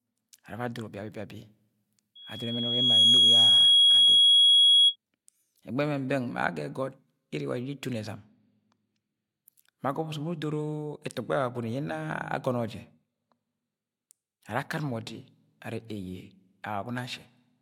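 A speech clip with loudspeaker feedback squeal from 2.15 to 4.96 s. A 3.3 kHz tone swells over about a second to roughly 15 dB above the speech as the mic-speaker loop exceeds unity gain. On a spectrogram it is a bright horizontal line; the waveform envelope balloons.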